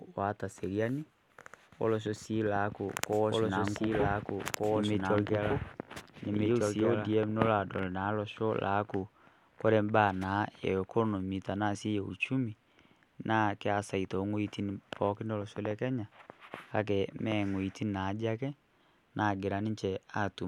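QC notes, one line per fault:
2.89–7.11 s: doubled audio track. The speech repeats about one and a half seconds late at roughly equal level with no room colour, likely from a second, slower capture path.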